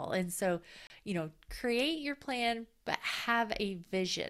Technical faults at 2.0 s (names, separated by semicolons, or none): none